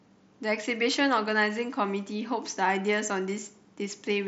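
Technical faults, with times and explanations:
Nothing stood out on listening to this speech clip.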